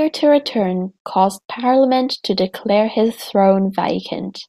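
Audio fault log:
Nothing to log here: the speech comes through with no faults to report anywhere in the clip.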